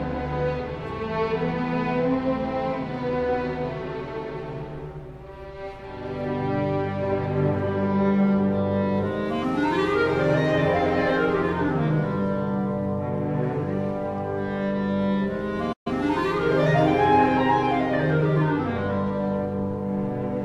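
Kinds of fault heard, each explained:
Playback stall: at 15.72 s the sound cuts off in mid-flow and stays silent for roughly 130 ms before resuming at 15.87 s. The likely cause is the player running short of data or its output thread being held up, leaving nothing to send to the output. On a waveform this shows as a flat silent gap with abrupt edges. A spectrogram shows a clean vertical blank band across all frequencies, with energy reappearing sharply at the restart.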